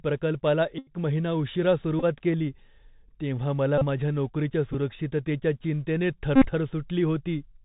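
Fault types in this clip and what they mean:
Bluetooth CVSD headset codec: the speech is carried as a one-bit delta stream at 64 kHz whose step size adapts, so nothing survives above 4 kHz and a granular hiss sits under the whole clip. Sibilants come out scratchy and loud bright syllables slope-overload into distortion. On a spectrogram the energy stops flat at 4 kHz with a grainy noise floor throughout; the waveform shows stepped, slew-limited edges on sharp transients.
Bluetooth headset packet repeated: voice packets on the headset link went missing and the previous packet's bits were decoded again in their place. Repeats every 3.75 ms give a buzz near 267 Hz, longest at 0.78 to 0.93 s, and shorter bursts near 2.00, 3.78 to 3.84 and 6.36 to 6.48 s, with a very short burst at 4.73 s. Spectrograms show harmonic stripes spaced about 267 Hz apart; waveforms show identical short segments tiled end to end.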